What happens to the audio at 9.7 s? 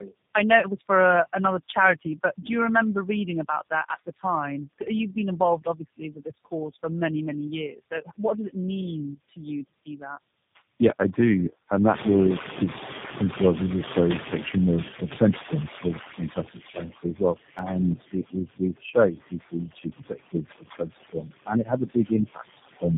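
The noise suppressor misjudges part of the speech as background noise between 9.29 and 10.02 s, just after "did it mean", and turns it down by up to about 14 dB. Roughly 150 ms of sound in that span comes out swallowed and faint, with soft consonants or word endings sinking away.

Throughout, including this moment, the same suppressor cuts steady noise by about 15 dB frame by frame, so the noise sinks between the words and rises under the speech.

The call also passes through tandem speech coding, with three low-rate codecs in a row, the last of them G.729A. Each one re-encodes the previous one's damage, leaving the speech rough, muffled and warbly, with nothing above 3.6 kHz.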